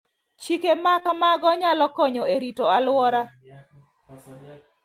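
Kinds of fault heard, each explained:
Short concealed packet loss: Three 20 ms gaps in a row, about 0.99 to 1.10 s, were filled by continuing the speech. This leaves a brief smear just before "nyalo konyo e rito".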